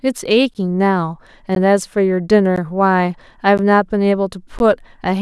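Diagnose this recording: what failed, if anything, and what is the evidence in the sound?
Chunk boundary failure in buffering or playback. Gaps between chunks of about 13 ms silence the speech at 0.54, 1.55, 2.56, 3.58 and 4.59 s. Each join of the one-second chunks starts late.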